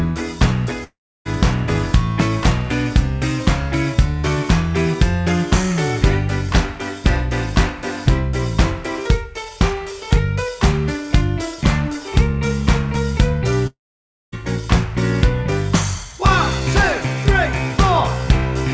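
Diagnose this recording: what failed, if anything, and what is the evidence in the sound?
The network stage likely failed, as a long network dropout. At 0.84 to 1.27 s and 13.67 to 14.34 s, packets stop. The receiver stretches the last sound into a fading buzz or hiss, then silence. About 0.42 s and 0.66 s are lost.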